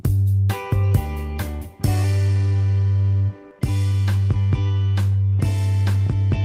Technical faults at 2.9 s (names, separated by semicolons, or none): none